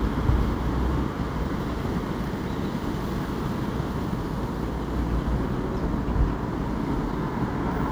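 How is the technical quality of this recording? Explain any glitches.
Nothing stood out on listening to this recording of sounds; there were no glitches to explain.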